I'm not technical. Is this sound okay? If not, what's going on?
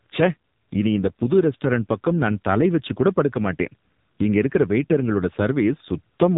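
No. The whole recording went through an AMR narrowband mobile codec squeezed hard, so it cuts everything above 3.8 kHz and makes speech sound buzzy, muffled and robotic throughout.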